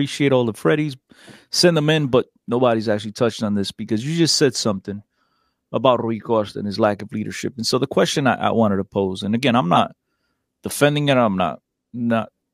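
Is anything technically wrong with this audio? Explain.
Yes, there's one glitch. Right after "pose and again I'm", from 9.75 to 9.79 s, a corrupt frame gets decoded: flipped bits in a couple of compressed frames were played anyway, throwing energy to wrong frequencies, so you hear a brief chirp, squeak, blip or burst of noise.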